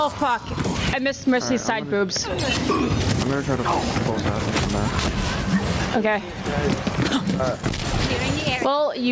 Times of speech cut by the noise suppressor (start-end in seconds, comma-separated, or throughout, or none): none